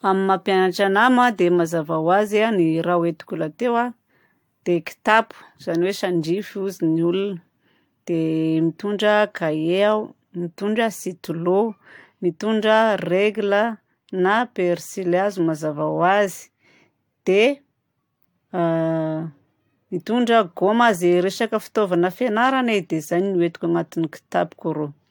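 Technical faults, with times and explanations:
Throughout, generation loss: the speech has a swirly, hollow smear with softened consonant attacks and nothing above 19.2 kHz, more damage than a single 96 kbit/s AAC-LC encode would leave, so it's likely been re-encoded around four times, each pass stacking fresh quantisation noise.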